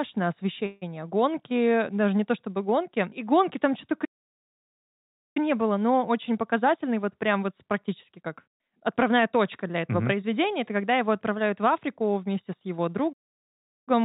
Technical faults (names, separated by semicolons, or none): call audio freeze; playback stall; jitter buffer speed-up